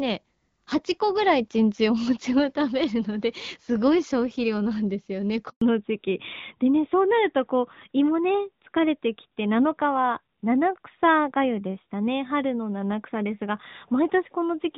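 A speech recording carrying two faults around 5.5 s. The first is a handover gap: the sound dies away abruptly at 5.49 s and stays silent for 120 ms until 5.61 s, when frames resume on the new link. On a waveform this is a flat, empty stretch, and on a spectrogram a blank vertical band across all frequencies. Immediately after, at 5.61 s, comes a fallback to narrowband that lasts to the end: all energy above 4 kHz disappears, so the audio turns duller and rougher. A spectrogram shows a hard horizontal ceiling at 4 kHz, against the wideband section before it, whose light coding texture fits AMR-WB at around 12.65 kbit/s and reaches roughly 7 kHz.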